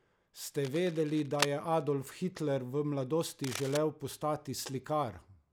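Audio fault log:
0.59–1.49 s and 3.44–3.77 s, cable scratch noise: dense, uneven scratching bursts sit over the speech, the first nearly as loud, the second quieter. Likely a worn connector being moved.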